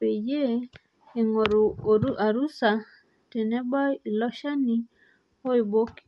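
Throughout, the speech has a breathy, grainy edge with nothing above about 11.5 kHz, likely Bluetooth LC3 compression at roughly 48 kbps.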